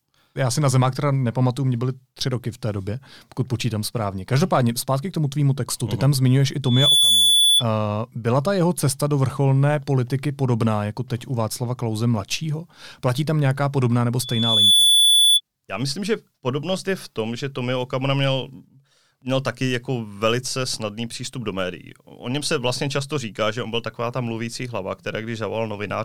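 A microphone is picking up the loudspeaker it feeds, and at 3.4 kHz the loop gain exceeds one, causing loudspeaker feedback squeal. From 6.64 to 7.64 s a tone swells over a fraction of a second above the speech; from 14.22 to 15.41 s it builds more slowly and sits louder still.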